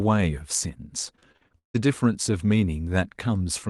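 From 1.15 s to 1.81 s the speech breaks up with repeated packet loss, giving a robotic sound. About seven holes open in quick succession. Each is patched by stretching the last bit of sound forward, so roughly half of that stretch is filled-in sound, not real speech. The longest hole lasts about 158 ms. The result is choppy, with pieces of speech missing between the patched segments.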